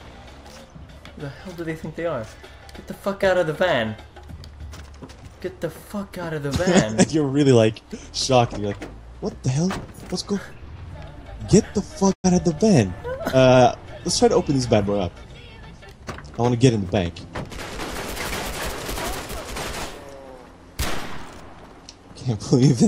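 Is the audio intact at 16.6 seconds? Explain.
Yes, the audio is intact at 16.6 seconds, with no dropout, glitch or other fault at that point.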